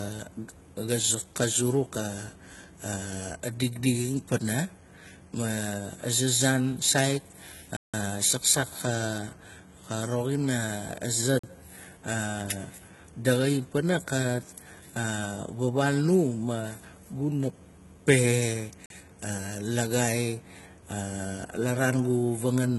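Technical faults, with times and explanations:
Throughout: HE-AAC compression, likely, since the speech has nothing above 11.8 kHz and its treble sounds rebuilt rather than captured. Copied bands with misaligned harmonics make sibilants gritty and metallic. The heavy damage fits a low bitrate of around 16 kbps.
7.77 to 7.94 s, 11.39 s and 18.86 s: block of digital silence, just after "saan sait" and "ma guna pe" for the first and third. The first hole is 170 ms long and the others about 43 ms. Each starts and stops abruptly with no fade, unlike a codec dropout's smeared fade. The lengths fit output buffers of 8192 and 2048 samples that were not filled in time.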